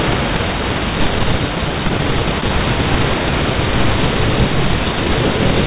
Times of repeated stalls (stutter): 1.89-2.51

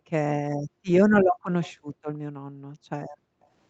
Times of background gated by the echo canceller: 0.00-0.11, 0.56-0.86, 1.23-1.45, 1.74-2.05, 2.32-3.46

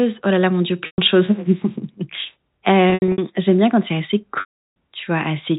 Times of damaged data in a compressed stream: none

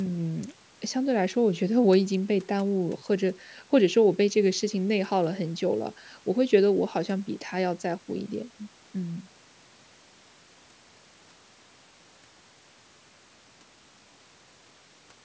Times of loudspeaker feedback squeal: none

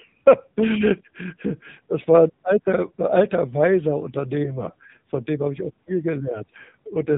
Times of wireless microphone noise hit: none

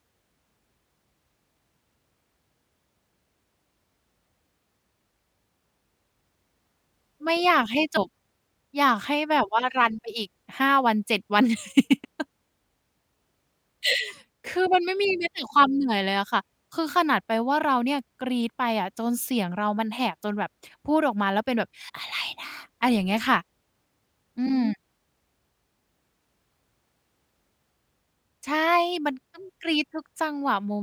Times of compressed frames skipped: 7.96, 12.03, 21.88

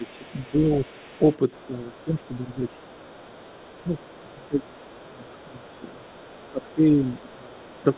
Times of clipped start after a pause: none

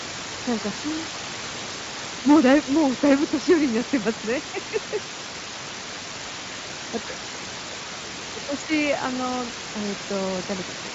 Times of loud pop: none

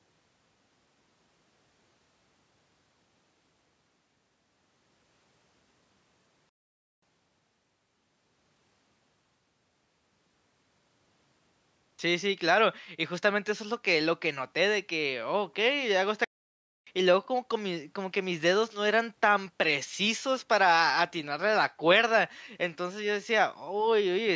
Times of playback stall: 6.49-7.02, 16.24-16.87

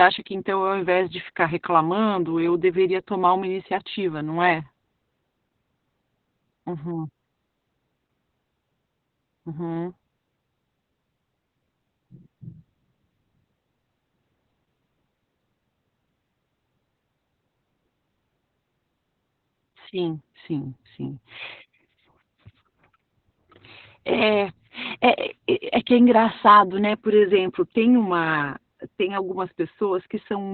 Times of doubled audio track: none

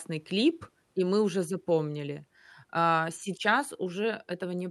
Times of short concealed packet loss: none

